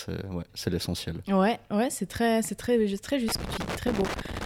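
At 3.29 s a loose connector crackle begins and continues to the end of the speech at 4.45 s. A worn or dirty contact somewhere in the signal chain is making and breaking intermittently as it shifts, so the audio is chopped into fragments, and any DC present on the line turns each reconnection into a pop. The result is an irregular, scratchy burst of crackle layered over the final second or so.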